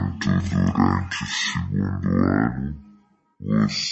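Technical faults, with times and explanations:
Throughout, wrong sample rate: the speech plays at half speed and a full octave low, which fits audio recorded at 44.1 kHz being played back near 22 kHz.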